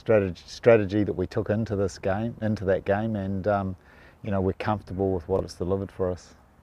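At 5.36 to 5.40 s the audio has chunks out of order. Over that 40 ms span, a 10 ms chunk is delivered three chunks late, so it plays after the material that should follow it. Nothing goes missing and nothing repeats, which separates it from a dropout or a stutter. Instead the sound briefly scrambles, with a garbled flicker across the three hard joins where mismatched waveforms are butted together.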